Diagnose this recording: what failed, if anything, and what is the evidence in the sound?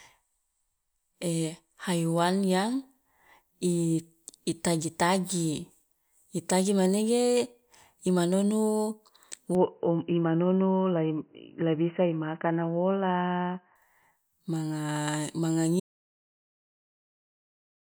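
From 9.55 to 13.76 s the speech turns narrow and boxy with no gap at the switch, at much the same level. The likely cause is an input switched to a poorer device at the driver stage. On a spectrogram, everything above 3 kHz vanishes, with a faint new noise floor.

At 15.80 s the sound cuts out and stays gone to the end, with no room tone left. This is an audio dropout to silence, likely from a lost device or link while the recorder kept writing silence. The waveform shows a flat line, and the spectrogram turns blank.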